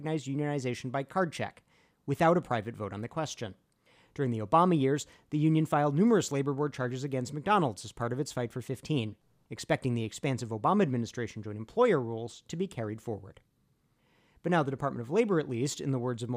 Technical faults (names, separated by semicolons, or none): none